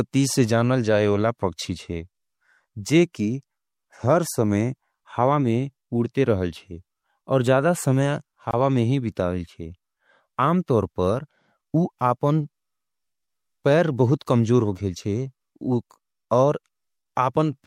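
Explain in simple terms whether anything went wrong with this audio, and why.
Something did go wrong. At 8.51 seconds the speech drops out for about 22 milliseconds, a tiny hole with smeared edges, then carries on where it left off. This is a gap at a join of encoded pieces: two separately compressed sections were spliced together without trimming the silent padding each one carried.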